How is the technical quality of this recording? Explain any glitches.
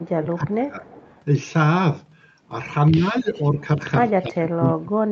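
The recording has two recurring call-processing faults, heard over a call path whose sound stops at 8 kHz.

Speech suppressed in double talk occurs at 0.03–0.94 s, 2.91–3.34 s, 3.51–3.59 s and 4.22 s to the end. The speech dips by about 5 to 40 dB, deepest at the end. This is likely an echo canceller ducking the talker while both sides spoke.

Echo leak follows at 0.94–1.22 s and 3.34–3.41 s. A faint copy of the speech, about 25–30 dB down and delayed by 0.31 s, is heard. It is likely loudspeaker echo that the far-end canceller left in.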